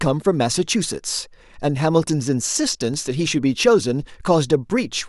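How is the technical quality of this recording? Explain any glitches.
The technical quality of the recording holds up, and there are no glitches to explain.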